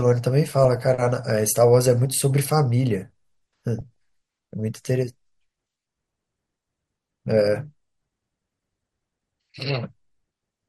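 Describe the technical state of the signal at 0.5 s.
At 0.5 s the speech is broken by short blips of noise in single sub-bands. This DAB burbling runs from 0.47 to 0.76 s: bit errors at a low rate, well under one percent, slipped past error correction and corrupted samples frame by frame.

Underneath, the speech sounds dull and granular, with a gurgling edge and upper bands flickering in and out. The likely cause is MP2 compression starved of bits, which fits a rate near 80 kbps, so higher sub-bands are dropped and the rest coarsely quantised.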